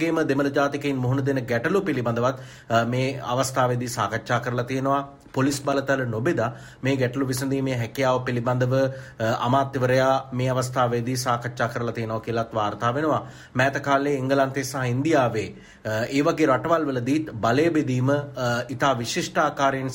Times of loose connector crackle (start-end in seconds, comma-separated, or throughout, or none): 5.52-5.73